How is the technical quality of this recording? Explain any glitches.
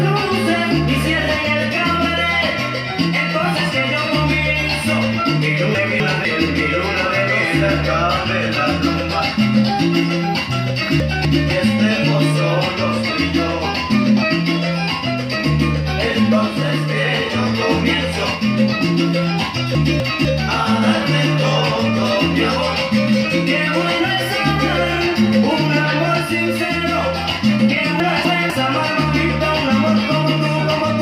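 The recording has four brief glitches, all the same kind. Chunks out of order occur at 5.75–6.25 s, 11.0–11.5 s, 19.75–20.25 s and 28.0–28.5 s. In each, a 250 ms chunk plays one chunk late, swapping places with its neighbour. The sound scrambles briefly, with three hard joins.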